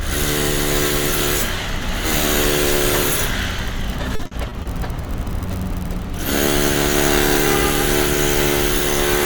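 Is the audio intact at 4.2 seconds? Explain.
No. Repeated packet loss (robotic sound) runs from 4.15 to 4.67 s: five short gaps, each patched by extending the preceding sound, leave it choppy with pieces missing.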